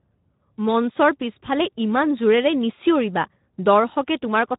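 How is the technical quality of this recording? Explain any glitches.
The quality is poor throughout: the speech sounds noisy and hoarse for the whole clip. The cause is Speex codec compression at a low setting, which fits roughly 11 kbps, leaving too few bits to model the vocal excitation faithfully.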